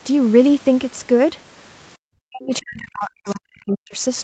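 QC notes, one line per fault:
2.18–3.99 s, speech suppressed in double talk: the voice dips, up to about 40 dB, totalling roughly one and a half seconds. This is likely an echo canceller clamping down while both ends talked.
3.28–3.35 s, other side's voice leaking through: a brief, faint second voice sits about 25 dB under the talker, likely loudspeaker echo the canceller missed. It carries different speech, so it is not a delayed copy of the talker or room reverberation.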